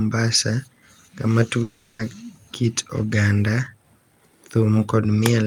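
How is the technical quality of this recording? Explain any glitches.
The recording has one clear glitch, a long network dropout from about 1.63 to 2.02 s. The speech breaks off and, for roughly 0.36 s, a buzzy, hissing continuation of the last sound fills the gap and fades, with no true silence. The speech then resumes further on, with the lost section simply missing. The likely cause is a stretch of audio that never arrived, which the receiver masked by extending the final sound it had. Its length and fading synthetic fill distinguish it from a brief packet-loss click or a clean muted gap.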